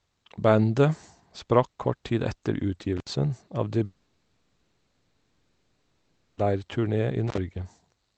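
Speech, carried over a call path whose Opus coding leaves the top end ending around 8 kHz, with two kinds of fault. An intermittent contact opens the line briefly at 2.97–3.10 s (about 66 ms open) and again at 7.27–7.38 s (about 49 ms open). Each time the sound cuts out with crackle at the break and make, as a loose plug or cable momentarily loses connection. From 3.85 to 6.45 s a long network dropout is the likely cause. The last sound is stretched into a synthetic fill lasting about 2.5 s, with no fully silent stretch. Speech then resumes further on, and the lost audio is never heard.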